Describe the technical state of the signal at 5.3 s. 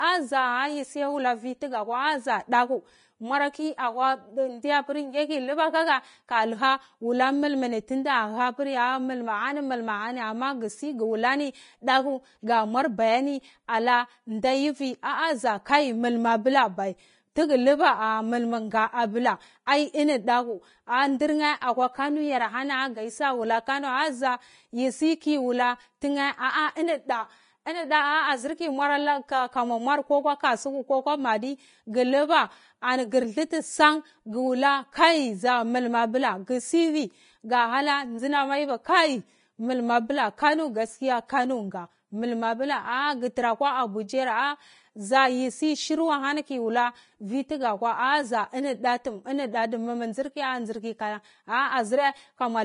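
At 5.3 s the speech carries the grainy, hissy coloring of low-bitrate Vorbis compression, present from start to end rather than at this moment alone. Nothing remains above 10.5 kHz, and the treble that survives is coarse and noisy, with roughened tones and softened consonant attacks. That points to a codec likely running near 30 kbps, which keeps a smooth spectral outline but quantises the fine high-frequency detail into noise of similar energy.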